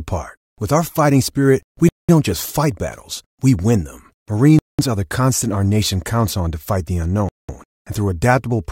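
Speech with a gap between chunks: 200 ms silences at 1.89, 4.59 and 7.29 s, recurring every 2.7 s, consistent with 2.5 s chunks joined with padding or late starts.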